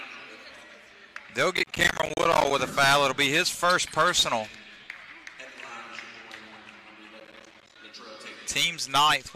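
Processor overload crackle runs from 1.57 to 2.51 s and again from 7.20 to 7.76 s. Dozens of short buffers, around 10 ms each, miss their deadlines and drop to silence. The hard-edged gaps pile up into a gritty, tearing crackle over the sound.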